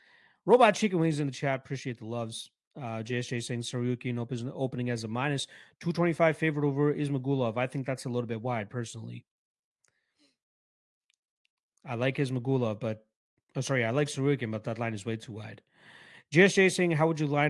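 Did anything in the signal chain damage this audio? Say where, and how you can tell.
No, no signal chain damage.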